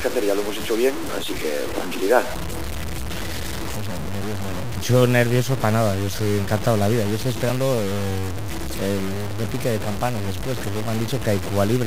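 From start to finish the audio carries a coarse, grainy distortion that rises and falls with the sound itself. It sits only about 10 dB below the signal, and the quietest passages sputter or drop out rather than fading smoothly. This is low bit depth without dither, likely from truncation to very few levels, which fits 5-bit truncation. The error tracks the signal and turns gritty instead of staying constant.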